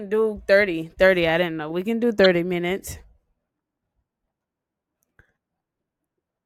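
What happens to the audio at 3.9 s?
Nothing goes wrong at 3.9 s: the speech carries straight through that moment without any dropout, click, glitch or other disturbance.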